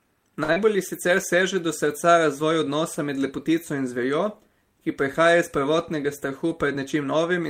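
From 0.43 to 0.51 s, a late packet left the jitter buffer empty, causing a short stall. The receiver held the last sound for 52 ms, so nothing is lost but it drags slightly.

At 0.53 to 0.58 s, 40 ms of speech never arrived, a short concealed packet loss. Extrapolated audio covers the gap, heard as a brief smear.

From 5.93 to 7.13 s, an overfull buffer triggered a jitter buffer speed-up. Trimming pitch periods removes roughly a twentieth of a second, so speech runs at 104% at unchanged pitch.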